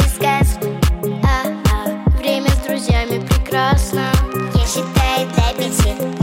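A train of clicks runs from 2.33 s to 6.18 s: around fifty similar pulses at roughly 14.8 per second, spaced unevenly and peaking about 5 dB above the sound, likely interference from nearby equipment or a faulty connection or power supply. They tick audibly through pauses too.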